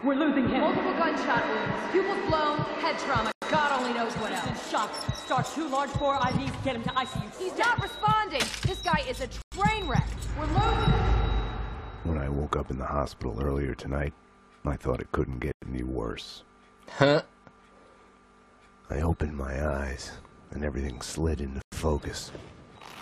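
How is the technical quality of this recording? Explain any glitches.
The recording is marred by regular interruptions. There is a gap between chunks at 3.32–3.42 s, 9.42–9.52 s, 15.52–15.62 s and 21.62–21.72 s. Each is a 100 ms hard-edged silence after every 6 s block, suggesting late-starting playback or padding at each join. Unlike a dropout, nothing is lost: the sound resumes exactly where it stopped.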